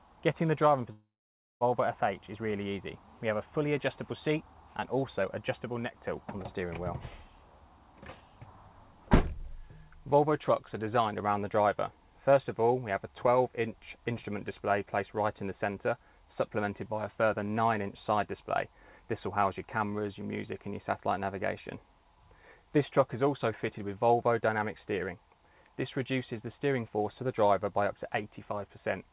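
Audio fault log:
0.92–1.64 s, long network dropout: The sound breaks off for about 0.7 s. The first moments carry on as a smeared, fading buzz. For roughly the last 0.55 s there is only silence. The audio then resumes further along, and the missing stretch is never heard. This is likely a gap in packet arrival that the receiver's concealment tried to cover by extending the last sound before giving up. Throughout, the G.711 call path cuts everything above 4 kHz.
5.87–5.96 s, one channel drops out: For just under a tenth of a second the level dips abruptly by about 6 dB and then snaps back. The likely cause is one stereo channel briefly going missing before the mix is summed to mono. The shared content loses half its contribution, which accounts for the 6 dB drop.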